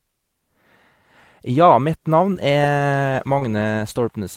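At 2.33 to 2.37 s a short concealed packet loss leaves about 20 ms missing. The decoder stretches the preceding sound to fill the hole, heard as a brief smear. Overlapping it, at 2.35 to 2.37 s, one lost packet is rebuilt from error correction: a 20 ms low-bitrate copy that sounds rougher and noisier, without the smear of extended sound. At 3.39 to 3.43 s another concealed loss repeats the smeared, extended-tail sound.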